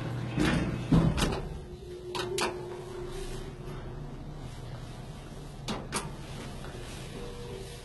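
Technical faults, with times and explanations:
Throughout, likely HE-AAC compression: heavy damage fits roughly 16 kbps, with gritty, metallic treble rebuilt by copying lower bands upward, so its harmonics misalign; a spectrogram shows blocky, repeated high-band patches ending abruptly at 11.8 kHz.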